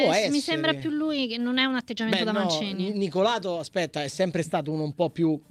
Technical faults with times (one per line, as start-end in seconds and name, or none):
none